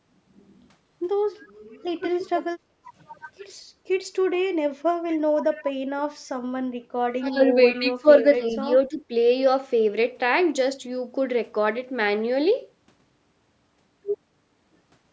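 Speech from a call in which the far end's echo canceller likely let some loudspeaker pickup through, an echo leak: a delayed copy of the speech trails by about 228 ms at 1.46 s (very faint), 5.1 to 5.64 s and 7.7 to 7.82 s (somewhat stronger but still well below the speech). Where both sides talk at once, the speech is suppressed in double talk: the canceller likely turns the talker down with the echo, so the speech dips by up to around 20 dB at 2.15 to 2.37 s, about 15 dB at 5.35 to 5.65 s, and in broken stretches between 7.18 and 9.12 s.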